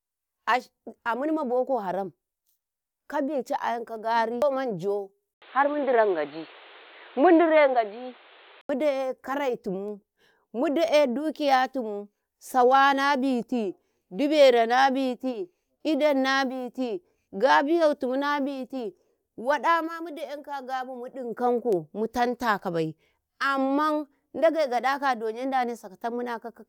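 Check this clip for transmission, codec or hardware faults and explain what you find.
One fault is audible. Input switched to a poorer device, 5.34 to 8.69 s: capture likely moved to a lower-grade microphone or headset call profile. After an 80 ms gap the speech turns dull and boxy, with nothing above 4.4 kHz, a level shift of roughly 5 dB and new background noise, then clears.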